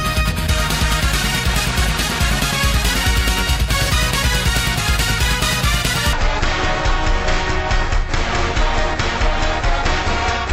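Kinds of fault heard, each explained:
stereo read as mono: The interleaved left and right samples of a stereo stream are taken one after another as a single channel, so from 6.13 s to the end the audio plays at half speed and drops a full octave, 12 semitones, in pitch.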